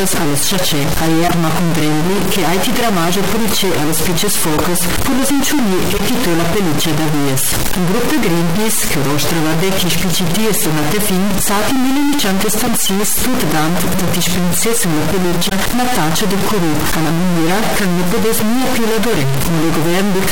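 Distortion rides on the sound from start to finish, and quiet passages fill with a hiss-like noise floor. This is a stuck bit, likely one converter or data line held at a fixed value, so roughly half the samples carry an error tied to the waveform.

Corrupt frame decoded events appear as short loud blips and chirps at 1.27–1.34, 4.57–4.61, 5.93–6.00, 9.90–9.98, 12.64–12.68, 15.49–15.52, 17.48–17.50 and 19.14–19.22 s. Each lasts 24 to 82 ms. Damaged compressed frames were played anyway, placing energy peaking around -5 dBFS at wrong frequencies. The 17.48 s event is somewhat quieter.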